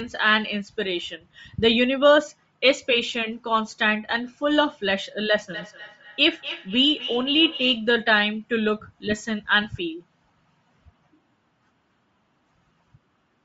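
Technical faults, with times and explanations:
Throughout: Bluetooth LC3 compression, likely the cause of the plainly audible codec damage. The upper spectrum sounds thinned and noise-filled, giving the speech a breathy, grainy edge. This fits LC3 at a low bitrate, around 32 kbps, with short 7.5 ms frames.
5.53 to 7.95 s: feedback echo between two devices. The speech returns at a steady interval of roughly 300 ms, peaking about 11 dB below the direct speech. A second device in the room replays the sound, and the first device's microphone picks it up again, so each repeat comes back thinner and more ringing.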